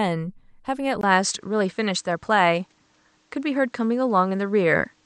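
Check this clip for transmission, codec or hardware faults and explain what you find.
One fault here, and it runs from 1.01 s to the end of the speech. There's a brief 20 ms gap at 1.01 s, and after it the sound loses its top end. Nothing comes through above 8.6 kHz, so it turns a bit duller. A faint new noise sits well under the signal, around 40 dB down, while loudness stays about the same. That pattern is likely an input switched to a poorer device, swapping in a narrower-band mic with its own noise floor.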